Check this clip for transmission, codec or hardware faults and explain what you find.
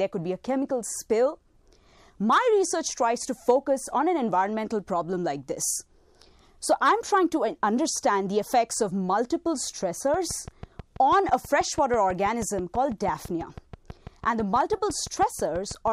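One fault is present: a train of clicks in the final part of the clip. From 10.14 s to 15.88 s, regular pulses arrive about 6.1 times per second, roughly forty in all, each peaking at about the level of the sound itself. The likely cause is interference from nearby equipment or a faulty connection or power supply injecting the same impulse repeatedly. It is heard as steady ticking over the sound and in pauses. A waveform shows evenly spaced spikes, and a spectrogram shows thin vertical broadband lines.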